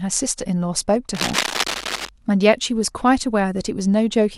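A speech clip. From about 1.1 to 2.1 s, cable scratch noise rasps over the speech, only slightly quieter than it. A worn cable or connector being moved is the likely cause.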